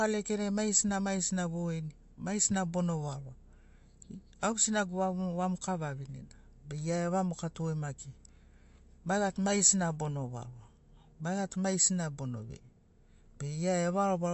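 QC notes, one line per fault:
Throughout: MP3 compression. Nothing reaches above 8 kHz, so sibilants and breath lack their top octave, and the damage is plainly audible as a watery, swirly texture, with metallic chirps on s sounds and smeared consonant attacks. The likely cause is an MP3 encoder starved of bits, which fits a rate around 48 kbps for speech: it cuts the treble at a fixed point and drops weak frequency lines that flicker on and off between frames.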